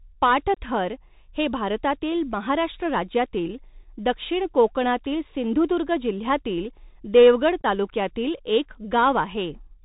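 Speech that sounds narrow and phone-like throughout, with nothing above 4 kHz, scratchy s sounds, strained loud high passages and a granular hiss beneath the voice. This is the Bluetooth CVSD headset codec: one bit per sample says only up or down, which fits a 64 kbps CVSD stream, and the adaptive step cannot keep pace with fast high-frequency movement. Two abrupt holes break the speech, at 0.54 to 0.57 s (22.5 ms missing) and at 7.61 to 7.65 s, where about 19 ms drops out in pieces scattered over 30 ms, the longest run 15 ms. The signal returns briefly quieter after each hole. This is unconcealed Bluetooth headset packet loss: several short voice packets between headset and phone never arrived and were replaced by silence or an idle pattern rather than patched over.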